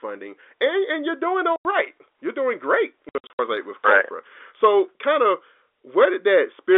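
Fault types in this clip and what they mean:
packet loss filled with silence: missing packets were replaced with silence, leaving hard-edged holes. There's a clean 90 ms gap at 1.56 s after "and and you're doing", then choppy dropouts from 3.09 to 3.39 s, about 210 ms lost in pieces up to 60 ms long, which fits 30 ms packets.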